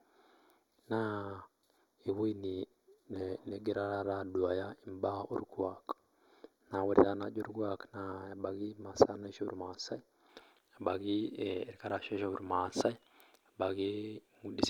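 From 0.00 to 10.29 s the speech has channel delay (comb filtering): one channel lags the other by roughly a fifth of a millisecond, so summing them cancels energy at evenly spaced frequencies starting near 3 kHz. It sounds thin and phasey, and a spectrogram shows fixed horizontal notch bands.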